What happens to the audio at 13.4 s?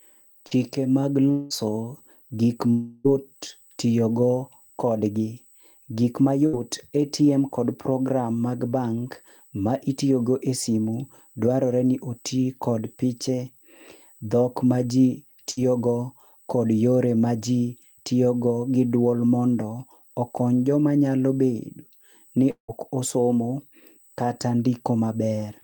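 At 13.4 s, as throughout, a USB whine sits under the speech: a fixed 8 kHz tone, strongest at 16 kHz and well below the voice, from bus microframe current leaking in, far higher than mains hum.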